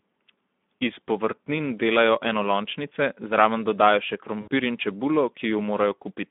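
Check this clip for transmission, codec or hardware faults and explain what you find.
Two faults are present.

Throughout, a Speex codec running at a low setting, which fits roughly 11 kbps, starves the excitation of bits, so the speech sounds hoarse and noisy within a 200 Hz to 3.5 kHz line band.

From 4.41 to 4.48 s, between "enolončnice zraven dodajo še" and "in čebulo", about 60 ms of packets went missing, consistent with three 20 ms frames. The decoder extended the last pitch and filter at falling gain, producing a brief, fading smear, with weakened speech just after.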